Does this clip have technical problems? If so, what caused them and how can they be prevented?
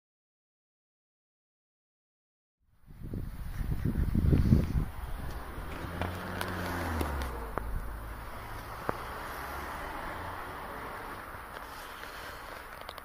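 No, no technical faults here.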